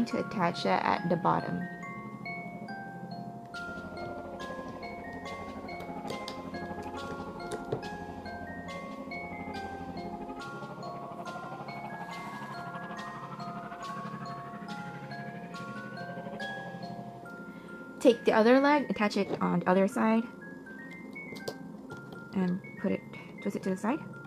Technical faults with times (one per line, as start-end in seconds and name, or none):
18.85-24.27 time-stretched section